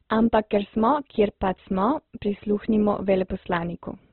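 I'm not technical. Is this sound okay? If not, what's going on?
No. Opus compression is the likely culprit, from start to finish. The speech sounds muffled and grainy, with nothing above about 4.1 kHz. Squeezed into very little data, the encoder cuts off the high end and fills gaps with rough noise.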